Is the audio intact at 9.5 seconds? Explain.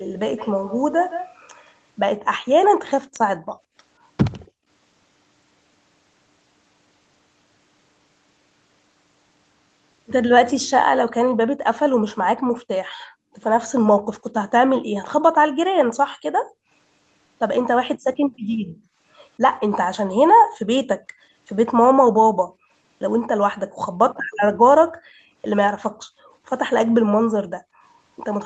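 Yes, the speech is intact at 9.5 seconds, with no fault at that moment.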